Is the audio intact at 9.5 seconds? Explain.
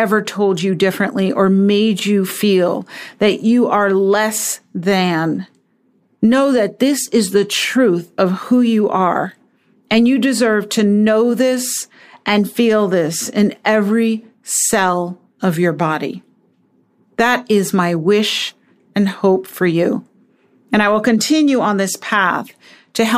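No. Clock slip clicks run from 0.51 s to 22.96 s, so 9.5 s falls inside them. Two unsynchronised clocks likely drift around 50 ppm apart, dropping or repeating a single sample roughly every half second. This is heard as faint, regular ticks over the speech.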